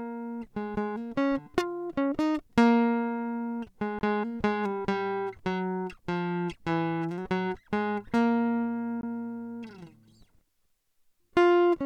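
At 3.99–4.01 s and again at 9.01–9.03 s, the music drops out for about 21 ms with abrupt edges: a gap between chunks. The audio arrives in 5-second segments, and silence is inserted at each join, so the music pauses rather than losing material.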